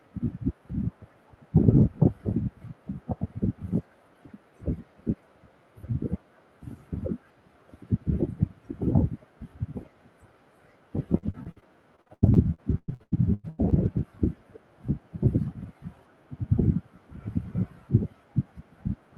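From 11.17 to 13.99 s, repeated packet loss gives choppy, robotic speech. Seventeen gaps, the longest 98 ms, are patched by stretching earlier sound.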